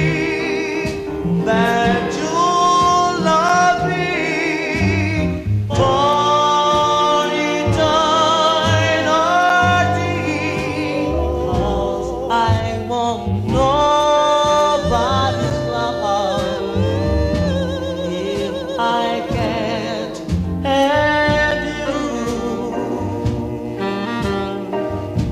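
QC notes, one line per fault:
3.49, 9.49, 15.50 and 21.51 s: gap between chunks. Each one is a tiny hard-edged dropout, about 7 ms of silence, landing exactly 6 s apart. Nothing is missing from the sound itself. Playback just stalls briefly at each join, as if each 6 s block were padded or started a touch late, so you hear a clean little hole right on the boundary every time.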